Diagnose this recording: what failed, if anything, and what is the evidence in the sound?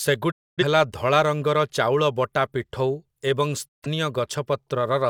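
Digital broadcast dropout at the receiver. The speech fades out over about 20 ms and goes silent from 0.30 to 0.63 s, returning at "ହେଲା ଧଳା ରଙ୍ଗର ଚାଉଳ", and again from 3.67 to 3.87 s. Bad frames were muted, and their content is lost.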